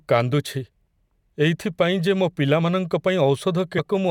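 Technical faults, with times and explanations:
3.78 s, damaged data in a compressed stream: a brief blip cuts into the speech, lasting about 16 ms. Corrupted bytes there made the decoder misread that stretch, lose sync and hunt for the next valid frame header.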